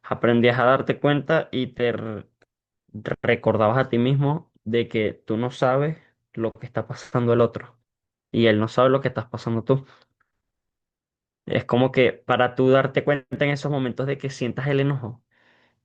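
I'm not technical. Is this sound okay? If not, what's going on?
Yes, this one's fine: there's nothing wrong with the sound that you'd need to worry about.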